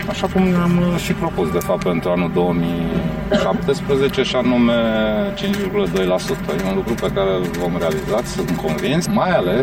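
Throughout the clip the sound is hollow and phasey. That is channel delay (comb filtering): one channel lags the other by around 5 ms, so summing them to mono cancels evenly spaced frequencies, the first notch sitting near 100 Hz.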